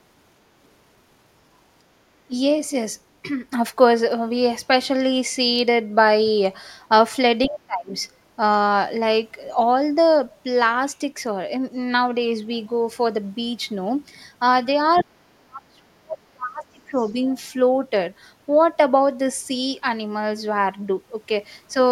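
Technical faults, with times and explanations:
2.28–2.32 s, 7.47–7.89 s and 15.02–16.95 s, speech suppressed in double talk: the talker dips sharply, by about 15, 30 and 35 dB at worst, likely because the echo canceller ducked both sides together.
14.95–15.03 s and 17.01–17.12 s, other side's voice leaking through: brief scraps of a second voice, about 15 dB then about 35 dB below the talker, likely residual loudspeaker echo.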